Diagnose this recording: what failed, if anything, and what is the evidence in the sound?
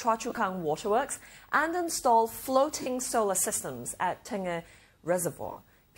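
Lost LE Audio frames on the Bluetooth codec link at 0.30–0.38, 2.82–2.87 and 5.52–5.57 s. LC3 concealment reuses the last spectrum with random signs, leaving smeared, noisy spectrogram blocks.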